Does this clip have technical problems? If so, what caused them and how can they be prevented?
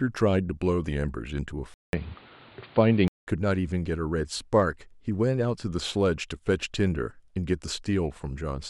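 Yes. From 1.74 to 3.27 s the speech turns dull and boxy, with nothing above 4.8 kHz, a level shift of about 5 dB, a new noise floor roughly 30 dB down, and a 0.19 s silence at the switch. This is likely an input switched to a poorer device. A simple low-pass filter would cut only the top, without the gap, new noise or level jump. Locking the recording input and disabling automatic device switching prevents it.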